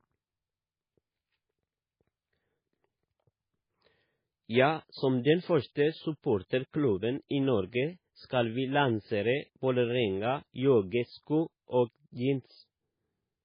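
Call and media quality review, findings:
Speech dull and watery for the full clip, nothing above 5 kHz; swirly, metallic s sounds. Likely MP3 compression at a very low bitrate, near 16 kbps: treble cut, weak lines dropping frame to frame. A plain low-pass filter wouldn't swirl.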